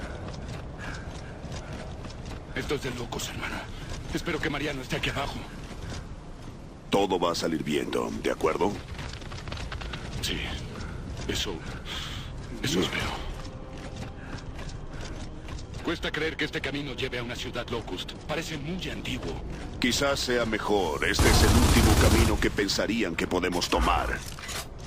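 Nothing stood out as a technical problem on listening to this recording.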